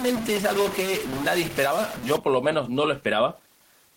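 From the start, distortion rides on the speech until 2.17 s. Even the pauses carry noise. This points to a stuck bit, likely one data bit held at a fixed value, which throws many samples off in a waveform-dependent pattern.

Gain pumping runs through the whole clip, a gain swing of roughly 5 dB. The level sounds squashed. The likely cause is excessive input gain clamped by a fast limiter or compressor.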